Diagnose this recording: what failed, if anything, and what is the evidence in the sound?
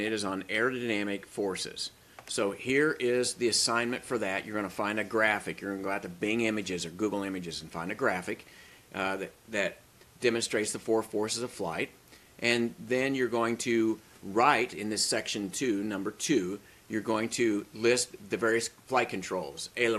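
Nothing in the recording points to a failure at any stage of the chain. No dropouts, glitches, level jumps or other disturbances can be heard at any point.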